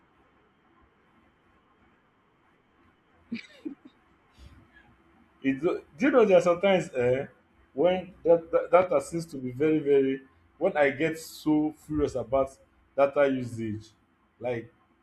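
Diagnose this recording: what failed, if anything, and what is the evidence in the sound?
A single loud pop cuts through the speech at 8.82 to 8.85 s, a sharp thump lasting only about 23 ms and peaking a few dB above the surrounding signal, while the speech carries on unbroken underneath. That pattern points to a transient added in the analogue wiring stage, likely a connector being disturbed, a switch, or a static discharge. A brief voltage step entered the chain and was shaped by the following circuitry into one short pulse.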